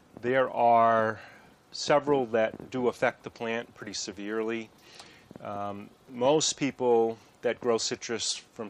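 From 8.29 to 8.31 s there is a short chirp-like blip, about -15 dBFS at its peak. This is a corrupt frame decoded. Damaged bits in the compressed data were played anyway, so energy landed at wrong frequencies. The length suggests a couple of frames.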